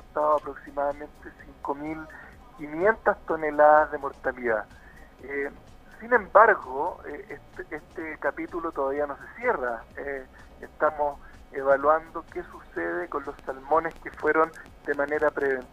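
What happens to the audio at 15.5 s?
At 15.5 s the audio is inside a train of clicks that runs from 13.39 s to 15.63 s. Around twenty sharp, similar pulses arrive at an average of 7.6 per second, spaced unevenly, each reaching roughly the level of the sound itself. They are heard as an irregular ticking laid over the audio, present through quieter moments as well. The likely cause is impulsive interference from nearby equipment or a faulty connection or power supply injecting repeated transients into the signal path.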